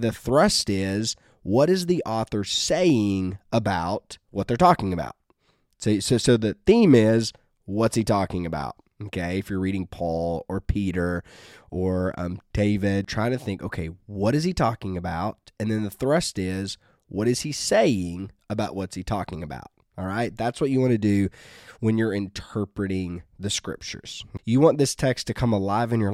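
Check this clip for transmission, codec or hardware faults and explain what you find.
Nothing here jumps out as a fault; the speech comes across steady and intact all the way along.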